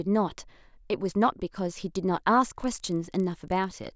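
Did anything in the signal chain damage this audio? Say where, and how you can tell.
Yes. From 2.56 s to the end, a rough 25 Hz buzz, a rapid train of ticks every 40 ms, rides on the speech and follows the signal rather than sitting underneath it. That points to the sample-rate conversion stage, a resampler restarted on every block: the 48 kHz to 16 kHz conversion was done block by block without carrying filter history across, so each 40 ms boundary gets a small discontinuity that repeats at the block rate.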